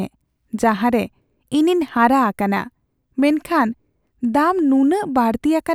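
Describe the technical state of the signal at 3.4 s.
At 3.4 s the speech signal is intact, with no audible fault at that moment.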